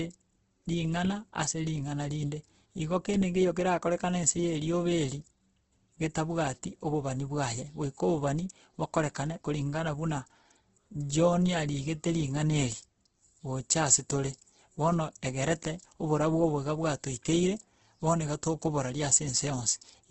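Throughout, heavy Opus compression is likely: speech sounds grainy and noisy, nothing above 8.2 kHz, its bands noise-filled rather than swirling as MP3 would.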